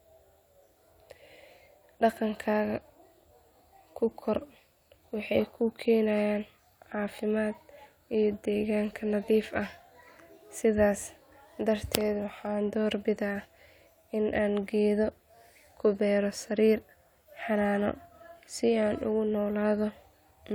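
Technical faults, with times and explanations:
No technical faults can be heard in the speech recording. There is nothing here that needs a time or an explanation.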